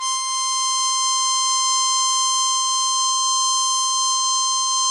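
From start to finish the music sounds dull and swirly, with nothing above about 11.1 kHz. This is low-bitrate audio saved at a high bitrate: the cut-off and artefacts point to a first pass near 48 kbit/s, likely later re-encoded around 320 kbit/s, which cannot restore what was lost.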